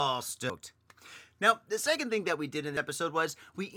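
Speech with damaged data in a compressed stream at 0.50–0.53 s and again at 2.77 s, right after "thing that we did": the decoder misreads corrupted frames and briefly emits a garbled blip.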